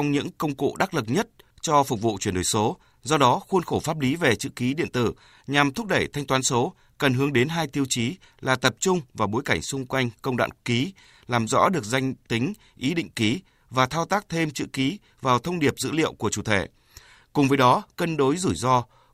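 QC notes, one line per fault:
No faults found in this speech clip on listening.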